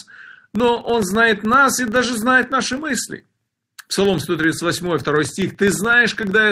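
All the way through the speech there's a steady buzz of ticks at about 23.4 Hz, rising and falling with the level. It's a filter restarted on every block: it starts each block from silence and throws a small transient, which fits a 2048-sample block size.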